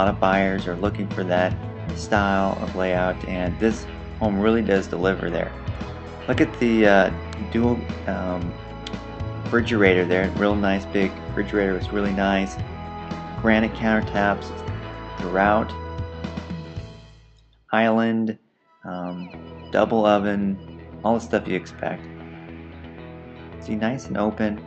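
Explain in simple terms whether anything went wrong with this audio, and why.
Nothing went wrong with this audio. It passed through an ordinary internet call connection, which leaves the sound a little less crisp at the very top, with everything above about 8 kHz trimmed away.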